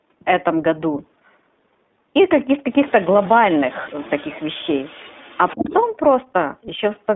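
Throughout, the iLBC codec limits the speech to roughly 200 Hz to 3.6 kHz, with a plainly rough, synthetic texture consistent with its 20 ms frames at 15.2 kbps. From 2.71 to 5.88 s, a faint second voice, around 25 dB below the speech, is likely the other side's voice leaking through from a loudspeaker the echo canceller did not fully remove. Between 5.54 and 5.66 s, the speech drops by about 20 dB for roughly a tenth of a second, likely speech suppressed in double talk as the canceller turned both voices down.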